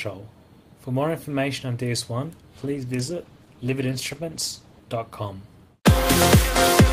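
From 2.57 to 4.87 s a call bitrate drop pushes the encoder from 32 to 14 kbps, coarsening coding and trimming highs, so the sound turns rough and muffled.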